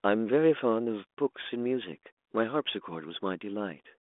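Nothing stood out as a fault on listening to this speech, heard through a telephone band running from about 250 Hz to 3.5 kHz.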